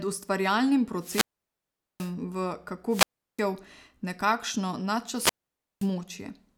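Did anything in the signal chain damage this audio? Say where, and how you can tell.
Yes. The wireless microphone's radio link faded three times, and the receiver's squelch muted its output each time, a wireless microphone squelch dropout. At 0.97–2.14 s, 2.89–3.44 s and 5.13–5.91 s, hiss rises, then silence lasts 0.79 s, 0.36 s and 0.52 s before speech returns.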